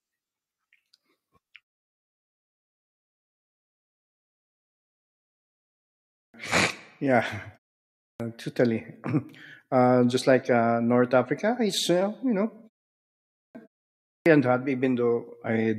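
Clipped start after a pause at 6.0, 7.91, 13.23 and 13.96 s: the output wakes late from silence, so each onset loses about 0.3 s and begins abruptly.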